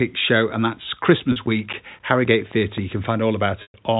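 A scratch on the disc destroyed more data than error correction could rebuild, once per revolution, so from 0.68 to 3.30 s the speech carries CD scratch ticks: eleven regular clicks or tiny dropouts, about four a second, the longest around 10 ms.

At 1.32 s a 40 ms gap, which fits two lost packets, was bridged by repeating the last pitch period, giving a brief buzzy hold. This packet loss with pitch repetition returns from 3.62 to 3.74 s, where the 120 ms loss, about six packets, fades the repeated buzz into silence before the speech resumes.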